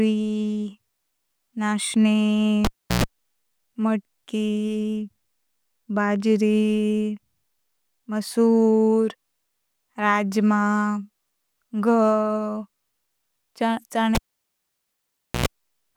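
At 2.65 s the cable is pulled and plugged in. A pop cuts the speech to near silence for 342 ms. A 60 Hz mains buzz sounds as the plug's tip connects, then another pop. It happens again at 14.15 s, silent for 1.26 s.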